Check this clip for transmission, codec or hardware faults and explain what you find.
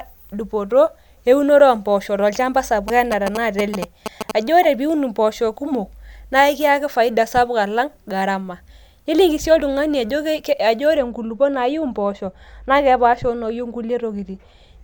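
Three faults are audible in the speech: an interference burst, a brief decoding glitch and a muffled final stretch.

From 2.88 to 4.31 s there is a galloping dit-dit-dit of short buzzes repeating at 217 Hz, sitting a little below the speech. These are GSM signalling bursts: a nearby 2G phone exchanging control traffic, its radio pulses rectified by the audio circuitry into audible buzzes.

At 4.63 to 4.66 s a sudden glitch cuts through, reaching a fairly loud peak. This is a corrupt frame decoded: bit errors hit roughly two compressed frames, and the decoder played them anyway, placing energy at wrong frequencies for about the length of those frames.

From 10.97 s to the end the sound turns dull and muffled, with treble falling smoothly to about 13 dB down at 10 kHz relative to 1 kHz. This is de-emphasis applied wrongly: a treble cut meant to reverse pre-emphasis was applied to audio that lacked it, or applied twice.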